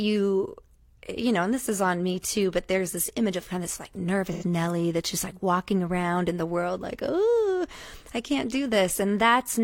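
AAC frame loss with concealment hits this speech clip at 4.32–4.44 s, between "kind of this like" and "nelly that's just like": the decoder filled about 85 ms from the last good spectrum, leaving a brief smeared, phasey patch consistent with two dropped frames.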